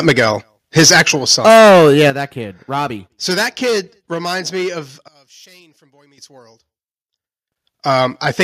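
Right at the start, from 0.07 to 0.25 s, the speech peaks hard against the converter's limit, likely microphone overload: input gain set about 6 dB too high, so the converter flattens the tops of a small share of the waveform and the loudest moments pick up a brittle, crackling edge. At 0.09 s the level drops by about 2 dB in one step, likely the microphone volume stepped down by call software reacting to that clipping, and speech and background fall together.

The overload returns more severely from 0.77 to 2.1 s, about 7 dB over, with roughly a sixth of the samples squared off, giving a sustained gritty distortion. The software likely keeps cutting input gain in single steps: about 4 dB at 1.08 s, then about 10 dB at 2.1 s, exactly where the clipping ends. Each step is an abrupt drop in loudness, and the 10 dB cut leaves everything noticeably quieter. Another step down of about 3 dB follows at 4.14 s.

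From 5.08 to 7.52 s the sound falls about 23 dB and turns faint, likely one channel inverted. With one stereo side's polarity flipped, the content shared by both channels cancels when they are summed to mono, leaving only a faint residue of their differences. At 6.18 s, inside that stretch, the microphone volume is stepped up by about 11 dB, so the weak residue jumps abruptly louder. At 8.25 s one final step down of about 3 dB lowers the level again.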